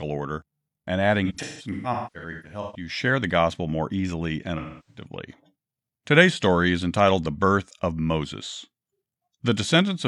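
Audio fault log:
1.25–2.89 s, AAC frame loss with concealment: right after "order and" and up to "share the gospel more", you hear a run of smeared, noisy, phasey patches. About 0.94 s of audio went missing in bursts spread over roughly 1.5 s, the longest around a fifth of a second. The decoder papers over each gap by reusing the last good spectrum with scrambled phase, so it smears rather than dropping out.
4.57–5.06 s, AAC frame loss with concealment: after "gospel more easily and", about 0.3 s is lost and gets the same treatment: a blurred, noisy smear where the decoder patches over the gap with the last good spectrum.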